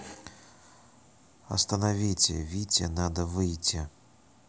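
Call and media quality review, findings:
No faults detected in this speech recording; signal chain shows no defects requiring a ticket.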